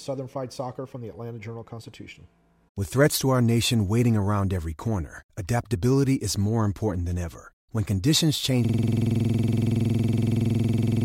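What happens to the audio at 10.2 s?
At 10.2 s the system has frozen in a system hang loop: the playback hardware keeps replaying one 46.44 ms slice, which fits a 2048-sample buffer. From 8.65 s, right after "conditions change", until the end, this repeats exactly at 21.5 Hz, 52 times over.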